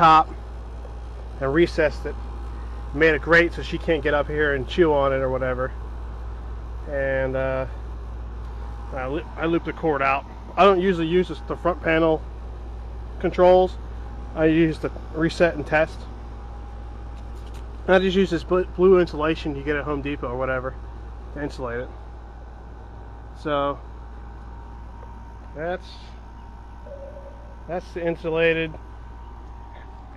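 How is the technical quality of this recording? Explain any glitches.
No glitches or faults are audible.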